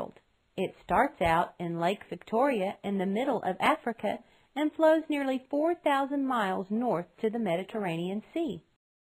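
No technical faults can be heard anywhere in this recording.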